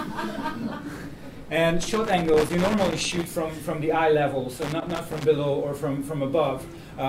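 From 1.81 to 3.24 s, and again from 4.62 to 5.25 s, the sound breaks into irregular crackle and scratching: loose connector crackle, a worn or dirty contact intermittently making and breaking the connection. Unlike steady hiss or periodic digital clicks, its bursts are erratic and clustered.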